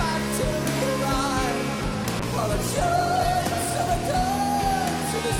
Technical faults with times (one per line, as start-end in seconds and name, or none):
2.21-3.69 call bitrate drop